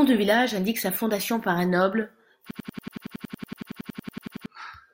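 At 2.51 s, just after "fondation par un noble", a system hang loop begins and runs to 4.46 s. The driver stalled while the hardware kept replaying one 92.88 ms chunk, which fits a 4096-sample buffer, 21 times. The result is a machine-gun stutter at 10.8 Hz, with about two seconds of speech lost.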